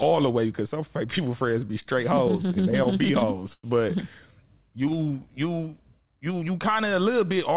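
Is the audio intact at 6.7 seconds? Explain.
No. Just after "you you", from 6.09 to 6.73 s, a jitter buffer speed-up trims about 70 ms of pitch-period slices, so the speech runs at 111% speed, hurried yet unchanged in pitch. A spectrogram shows compressed time structure with steady harmonic spacing.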